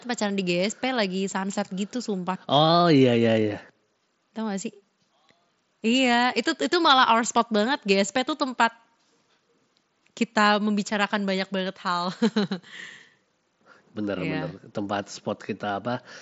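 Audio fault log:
No faults; the speech runs over a Bluetooth mSBC headset link, with nothing above about 7.7 kHz and the light grain that codec leaves on louder passages.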